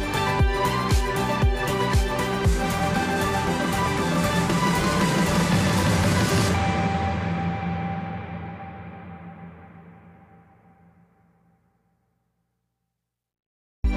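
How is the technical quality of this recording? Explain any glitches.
No glitches can be heard, and the technical quality of this recording holds steady throughout.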